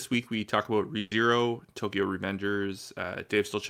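At 0.99 s a burst of packet loss hits the stream: several consecutive packets of speech were lost or arrived too late to play. The receiver covered the gap by extending the last sound it had and letting it fade, so about 120 ms is filled with that stretched, dimming tail. The speech resumes at 1.13 s, but the 120 ms that should have been heard in between never arrives.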